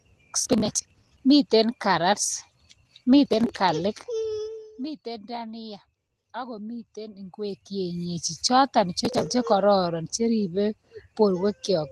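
In this speech recording, the processor repeatedly failed to deliver its small audio buffers on time, and the missed buffers were skipped rather than filled. The result is processor overload crackle: gritty, tearing bursts from 0.40 to 1.19 s, 3.26 to 3.49 s and 9.05 to 9.31 s. The tiny hard-edged gaps fit buffers of around 10 ms. From 4.39 to 4.73 s, a level drop of about 15 dB was applied in unsmoothed 1 dB steps, roughly fifty a second. Each step clicks, producing zipper noise, a rapid ticking riding on the speech as it fades.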